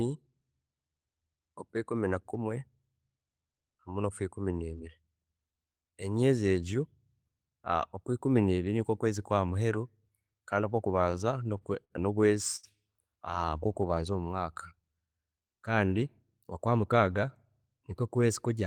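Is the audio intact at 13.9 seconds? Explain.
No. From 13.31 to 13.96 s, a jitter buffer slow-down repeats pitch periods to build 72 ms of reserve. The speech drags at 91% speed with unchanged pitch.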